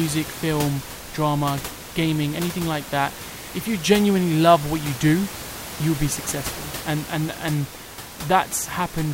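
No technical faults can be heard in this speech recording; the only thing beneath the speech is the background sound of the room itself, sitting about 13 dB below it, which belongs to the recording rather than to any failure of the system.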